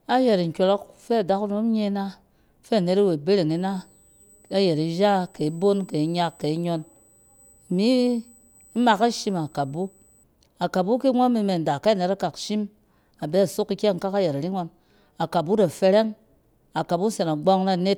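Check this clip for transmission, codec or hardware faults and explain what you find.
One hardware fault is present in this speech. USB whine runs from 3.50 to 10.24 s: current drawn in 125-microsecond microframes leaks into the audio ground, giving a steady 8 kHz tone roughly 35 dB below the speech.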